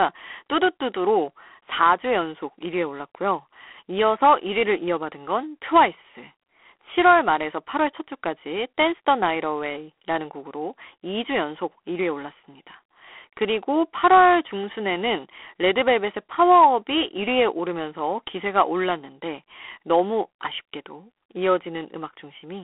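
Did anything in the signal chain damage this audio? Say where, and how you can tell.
Yes, the codec stage. Through the whole clip the speech has a harsh, rasping hiss that rises and falls with its level, and the band sits at roughly 300 Hz to 3.5 kHz, with nothing above 3.8 kHz. That points to G.726 ADPCM, most likely at 24 kbit/s. The codec sends each sample as a few bits of difference from a running prediction, so the quantisation error tracks the signal and sounds like gritty noise riding on the speech.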